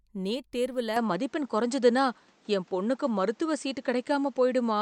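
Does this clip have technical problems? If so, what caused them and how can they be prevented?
Yes. From 0.96 s, just after "நீட் தேர்வுல", to the end of the clip, the speech turns duller and boxier, with nothing above 8.6 kHz, a level change of a few decibels, and new, faint background noise. The switch is immediate, with no gap. The likely cause is an input switched to a poorer device, where the system moved mid-recording to a narrower-band microphone with its own tone, gain and noise floor. To prevent it, lock the recording input to one device and turn off automatic device switching before recording.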